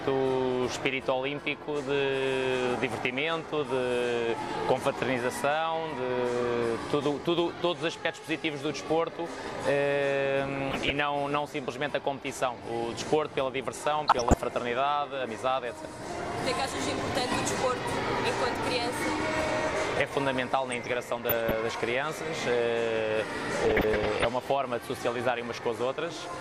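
DAB burbling at 10.43–10.90 s, 14.08–14.38 s, 20.72–21.54 s and 23.65–24.25 s. Under weak reception, bit errors of roughly 0.3 to 0.7 percent slip past error correction into the MP2 data. Corrupted samples put short blips of noise in single sub-bands, and corrupted scale factors make sub-bands jump in level for up to a frame, producing short burbling blips over the audio.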